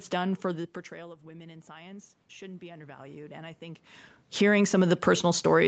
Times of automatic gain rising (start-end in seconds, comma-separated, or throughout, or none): 0.44-5.07